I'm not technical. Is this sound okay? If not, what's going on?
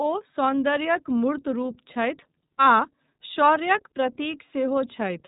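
No. The whole clip carries iLBC codec damage: nothing above 3.8 kHz survives, so speech sounds muffled, and each 30 ms chunk comes out slightly rough and synthetic, not merely dull.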